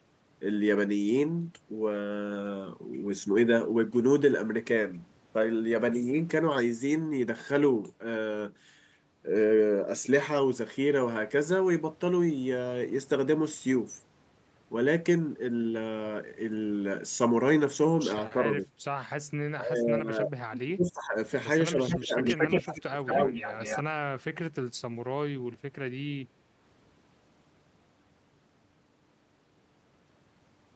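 Speech comes over a call line, band-limited to 8 kHz, as Opus at a low bitrate would give. It shows speech suppressed in double talk at 18.32–18.69, 19.55–20.32, 20.48–21.16, 21.71–21.79 and 21.95–23.16 s. The voice dips or breaks up in pieces. The drops reach about 10, 15, 25, 5 and 25 dB. The likely cause is an echo canceller meeting both sides talking at once. It cannot tell this talker from loudspeaker echo, so it turns everything down. An echo leak is heard at 21.9–22.74 and 23.05–23.83 s. A copy of the voice returns 227 ms late. It sits about 5 dB below the speech at first, then at about the same level. It likely comes from a far-end loudspeaker whose echo canceller let part of the pickup through and sent it back.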